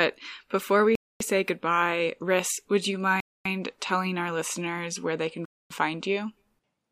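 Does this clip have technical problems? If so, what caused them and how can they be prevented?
Yes. The speech was delivered in 2-second chunks with a 250 ms silence inserted at each join, a gap between chunks, producing short holes at 0.95 s (after "before we"), 3.20 s (after "would you") and 5.45 s (after "listeners where they can"). Prevent it by trimming codec padding and scheduling chunks back to back.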